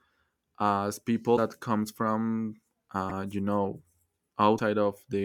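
Broken MP3 bit reservoir glitches hit this speech at 1.36–1.39 s, just before "comes from", at 3.09–3.11 s, between "comes from" and "you know", and at 4.57–4.60 s, each a brief chirp or hole lasting about one 24 ms frame. Likely cause: dropped MP3 frames, so the next frame borrowed reservoir bytes that belonged to another frame.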